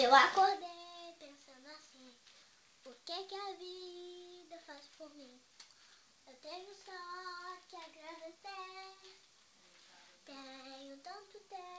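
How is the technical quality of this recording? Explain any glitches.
No glitches can be heard in the recording. It has passed through a wideband call path that fits G.722 at 64 kbps, so there is nothing above 8 kHz, and the gentle fader-like level moves change smoothly.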